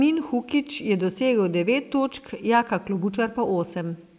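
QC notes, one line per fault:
No fault is heard in this speech clip. Nothing in it needs a timestamp or a fix.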